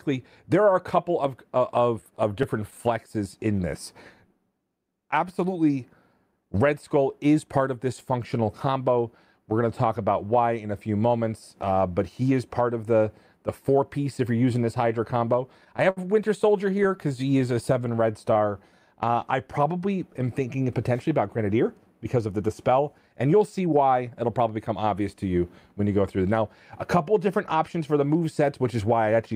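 Between 2.01 and 2.79 s the audio shows scattered short gaps: about five lost or late packets, each patched by carrying the preceding sound forward. The patches are brief, the longest around 15 ms, and together they add 18 ms, so they register as small ticks or smears rather than a held sound. That sets them apart from a single stall, where one hole is stretched long enough to be heard as a held sound. Such a stall from a late packet occurs at 15.90 to 15.99 s. One packet missed its slot, the jitter buffer ran dry, and the receiver held the last sound for 63 ms until the packet turned up. Nothing is lost, but playback is now 63 ms later, and the held stretch carries a faint buzz or dip. A second run of scattered short gaps follows from 16.71 to 17.95 s, again about five of them, each no more than about 10 ms. They cover only about 3% of that span, against about 7% for the first set. Overlapping them, from 16.80 to 19.72 s, is a jitter buffer slow-down: the receiver rebuilt its reserve by repeating single pitch periods and slivers of pauses, adding 155 ms and running at 95% speed. 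Pitch is unchanged, so the effect is drawn-out sound rather than the isolated hiccups of concealment. The reverse happens from 21.64 to 24.73 s in a jitter buffer speed-up. Surplus buffered audio was trimmed by cutting out short pitch-period pieces, removing roughly 200 ms, so the sound runs at 106% speed at the same pitch and comes across as slightly hurried. It differs from the slow-down only in direction: material is shortened rather than repeated.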